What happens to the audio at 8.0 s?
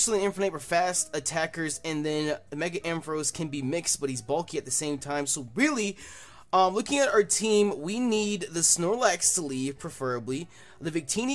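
Nothing goes wrong at 8.0 s; the audio runs through that moment intact, with no dropout, click, distortion or other fault.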